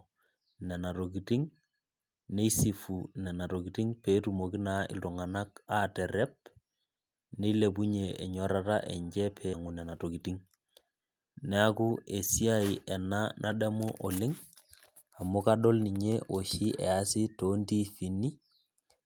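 At 9.53 s there is a skip ahead. Roughly 0.7 s of speech is simply missing. Playback jumps forward with no gap filled. The audio on either side is joined almost directly. The listener hears an abrupt cut that loses part of the flow.

From 9.63 to 10.69 s comes a jitter buffer speed-up. The buffer held too much audio and trimmed it back. Short pitch-period pieces were cut repeatedly, removing about 150 ms. Speech runs at 111% speed. Pitch stays the same, but it sounds hurried.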